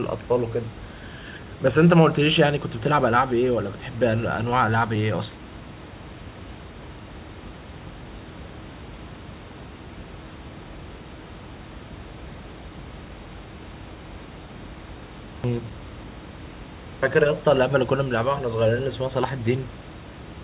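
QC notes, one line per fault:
15.24 to 15.44 s, system hang loop: a single 40 ms slice of audio repeats exactly, five times in a row, then normal sound resumes. The machine or its driver stalled while the sound hardware kept replaying the same ring buffer. Because each pass is so short, the repeats fuse into a steady buzz at 25 Hz. About a fifth of a second of real audio is lost, heard against band-limited call audio topping out near 4 kHz.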